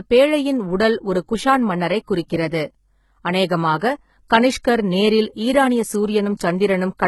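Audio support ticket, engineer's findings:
Sibilants gritty, lispy, metallic throughout; nothing above 11.8 kHz. Likely HE-AAC compression at a very low bitrate, around 16 kbps: treble rebuilt by band replication, harmonics misaligned.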